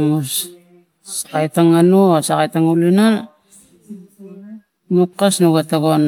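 Nothing in this speech recording stands out as a technical fault; it's just talking, with nothing breaking in to interrupt it.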